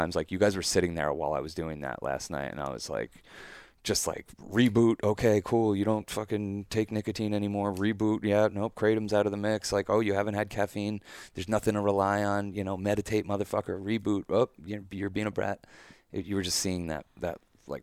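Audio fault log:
No faults detected in the speech.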